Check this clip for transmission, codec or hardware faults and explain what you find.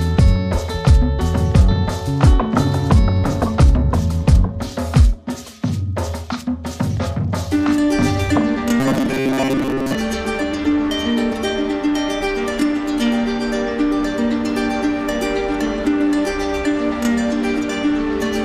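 One fault is present. From 8.80 to 9.95 s, robotic sound from repeated short buffers: a rigid 134 Hz metallic buzz, likely from repeating a 7.5 ms buffer in place of most of the audio.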